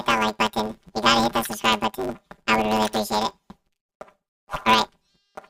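From the start to the end, the audio is planar audio read as interleaved. Each 10 ms block stores every left sample first, then every right sample. The player takes them as alternating left-right pairs instead. So each block plays twice at double speed, left half then right half. The overall pace stays correct. Because the blocks are so short, there is no clear octave jump. The sound takes on a robotic buzz at 100 Hz, the block rate.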